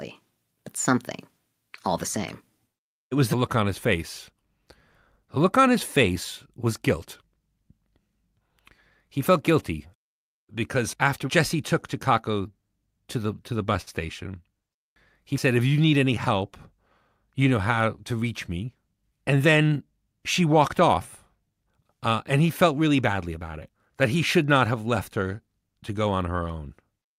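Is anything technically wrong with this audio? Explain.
Yes, the speech has two faults.

From 13.81 to 13.89 s there is a short stall from a late packet. A packet arrived late, so the jitter buffer ran dry and the receiver held the last sound for about 54 ms before resuming where it left off. Nothing is lost, but a sound lingers with a slight buzz or dip. On a spectrogram, the harmonics run flat and unchanged for that stretch.

From 15.85 to 16.30 s a jitter buffer speed-up follows. The receiver trimmed whole pitch periods again and again, about 40 ms in total, to shrink the excess delay, so the speech runs at 108% speed with unchanged pitch and sounds hurried. The waveform shows compressed syllables without any shift in harmonic spacing.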